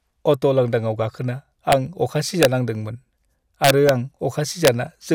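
Violent, sharp cracks break through the speech four times. The first comes at 1.72 s, just after "अट' लांदांआव गाखोना", and the others at 2.43–2.45 s, 3.64–3.89 s and 4.65–4.68 s. This is integer overflow. Loud peaks pushed the signal past the largest integer by only about 1 to 2 dB. Instead of being held at the limit, they wrapped around to the opposite sign and jumped across the full range. That makes them far harsher than ordinary clipping.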